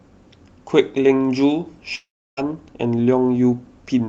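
From 1.95 s to 2.39 s the speech breaks off. The last sound is stretched into a buzzy, fading tail, then about 320 ms of near-silence follows before the speech resumes with roughly 420 ms of material simply gone. This is likely a long network dropout on the call path, whose codec audibly limits the top end to around 8 kHz. Unlike a brief packet-loss glitch, the fill gives out and leaves silence, and unlike an edit cut, the gap carries that decaying tail.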